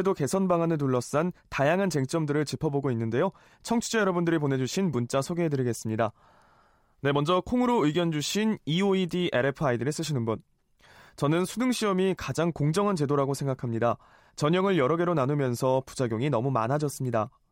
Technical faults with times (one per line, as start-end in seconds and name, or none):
none